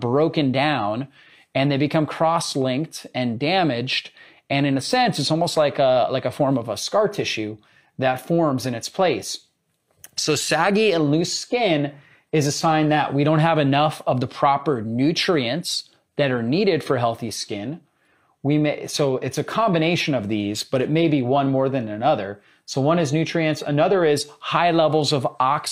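A speech recording with nothing technically wrong with it.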